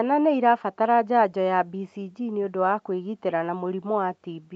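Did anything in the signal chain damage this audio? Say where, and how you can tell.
No, nothing in the chain damaged it; the speech simply stops at about 8 kHz, as expected from a wideband call path through the microphone processing and the Opus codec.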